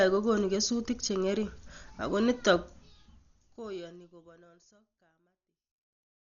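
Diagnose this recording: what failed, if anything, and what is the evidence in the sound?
Codec stage, throughout. The speech is dull, with nothing above 7 kHz and rough, fluttering noise. This is likely Dolby Digital compression, starved at about 40 kbps.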